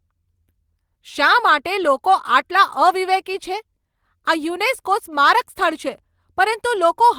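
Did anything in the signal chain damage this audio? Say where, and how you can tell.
No, nothing along the way seems to have hurt this speech; it all comes through intact, with no stage of the chain leaving a mark you can hear.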